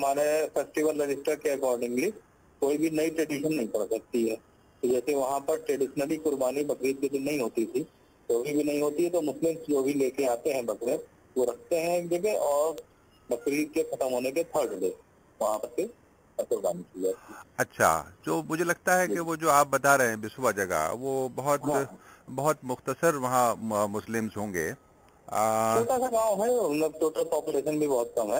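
At 12.78 s a single sharp snap, peaking at about -20 dBFS, lands on top of the sound. It is likely an electrical switching spike, an arc from a nearby switch, motor or static discharge picked up by the audio line. Unlike a dropout, the sound underneath continues uninterrupted.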